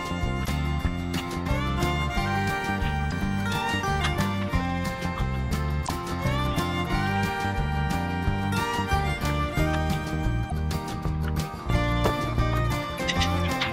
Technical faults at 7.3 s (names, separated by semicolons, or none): none